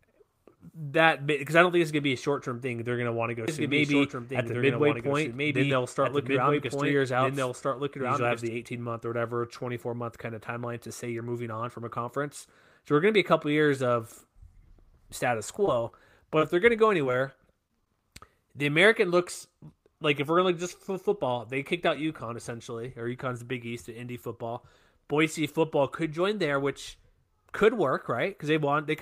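From 3.48 to 8.48 s there is a doubled audio track. A second copy of the speech runs about 1.5 s behind, roughly 5 dB quieter. It has no room tail. It starts and stops abruptly. The likely cause is a second, slower capture path.

From 15.63 to 15.92 s comes repeated packet loss with a robotic sound. Four holes arrive in quick succession, the longest 12 ms. Each is patched by extending the previous sound. The stretch turns choppy.

At 16.39 to 16.41 s there is a short concealed packet loss. About 10 ms of audio never arrived in time. The decoder filled 13 ms by continuing the last sound, then blended back. It is heard as a brief smear or wobble.

From 16.77 to 17.87 s there are scattered short gaps. Around seven small holes appear, spaced apart, the longest about 15 ms. Each is filled by continuing the preceding sound. The speech stays clear but has small hiccups and ticks.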